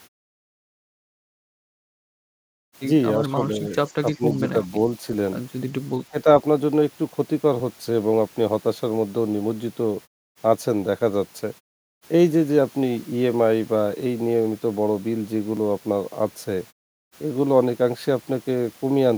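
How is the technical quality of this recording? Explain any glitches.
There are two kinds of glitch: a few brief dips in level early on and one tiny skip later.

At 3.28–3.38 s, 4.17–4.69 s and 6.11–6.27 s the speech ducks, by about 10 dB in the first two and closer to 15 dB in the third. Each dip is short, a tenth of a second or so, even inside the longer 4.17–4.69 s window. This is likely speech suppressed in double talk. The echo canceller hears both ends active at once, can't separate this talker from the loudspeaker echo, and pulls everything down for a moment.

At 11.58 s there's a single small skip where audio is missing between chunks. A sliver of roughly a hundredth of a second has dropped out, and the two sides are butted together with no gap, so you hear a tiny jump rather than silence. That likely comes from the processor losing a bit of signal while it hands over from one 4-second chunk to the next. 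The muted pauses are doing their normal job, fading out in gaps and coming back in time.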